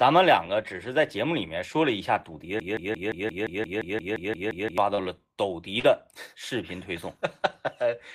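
From 2.60 to 4.78 s, a 174 ms fragment stutters back to back thirteen times, a broken-record loop, likely from a stalled stream resending its last buffered piece.

At 4.95 to 4.99 s and 5.79 to 5.85 s, brief smears mark short concealed packet loss, where about 20 and 40 ms went missing and were filled by extending the preceding sound.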